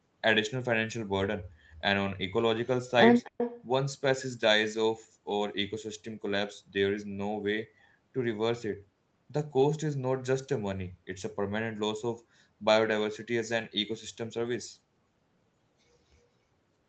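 From 3.24 to 3.63 s there is an echo leak. A far-end echo canceller likely missed loudspeaker pickup, so the speech returns 277 ms late, about 10 dB quieter.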